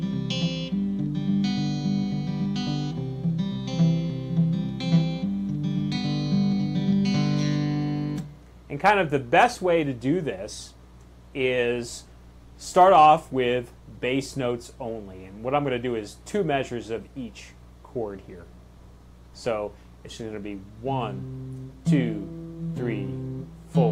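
No technical faults can be heard anywhere in the recording.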